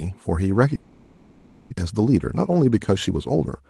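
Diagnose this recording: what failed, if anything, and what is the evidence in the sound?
Network stage, long network dropout. From 0.75 s to 1.74 s the speech gives way to a buzzy continuation of the last sound that fades into low steady noise, never true silence. When speech returns, about 0.6 s is simply gone. This was likely packets ceasing to arrive. A local underrun would leave shorter, sharper gaps instead of this long decaying concealment tail.

Buffer stage, jitter buffer speed-up. From 1.75 s to 3.61 s the speech runs about 114% of normal speed and sounds hurried, yet its pitch is unchanged. The receiver trims pitch-period slices, around 0.3 s in total, to drain roughly 0.4 s of backlog left by the late packets. A sample-rate mismatch would raise the pitch, and this doesn't. Through both faults the Opus call path caps the high end near 12 kHz.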